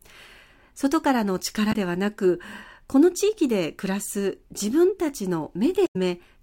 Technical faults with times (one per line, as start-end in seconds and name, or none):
1.69-1.75 damaged data in a compressed stream
5.84-5.96 damaged data in a compressed stream